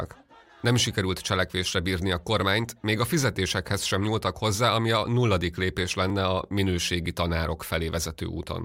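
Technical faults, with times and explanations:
2.42 s and 6.10 s, block of digital silence: a 1.33 ms stretch drops to silence, after "sikerült cselekvésre bírni a" and after "ami a nulladik lépés", which fits a 64-sample buffer left unfilled. The abrupt cut and return make a brief tick each time.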